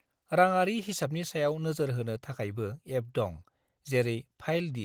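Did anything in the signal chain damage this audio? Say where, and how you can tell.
No, nothing damaged it.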